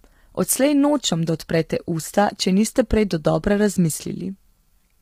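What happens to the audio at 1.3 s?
At 1.3 s the speech sounds rough and grainy, with noise filling the gaps between harmonics and a thin, synthetic-sounding top band, as it does throughout the clip. This is likely low-delay AAC compression. Its short frames resolve pitch harmonics poorly, and the heavy damage fits a low bitrate of around 24 kbps.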